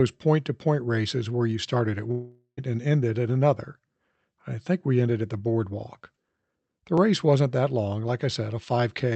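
From 2.11 to 2.59 s there is a gap most likely caused by a long network dropout. The last sound is stretched into a fading buzz, ending in a short silence of about 80 ms, and speech resumes with roughly half a second skipped. The length and the missing material set it apart from a brief stutter.

At 6.98 s a repeated buffer shows up as a single click-like blip. A 5.33 ms slice, which fits a 256-sample buffer, plays twice with a hard join. Unlike the dropout, it is extremely short and nothing is lost.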